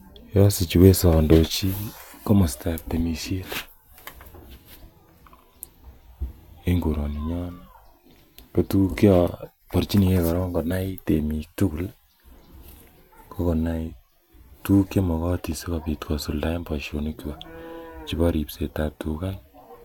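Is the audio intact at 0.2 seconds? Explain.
Yes, the speech at 0.2 seconds plays through intact, with no dropout, click, distortion or other fault at that moment.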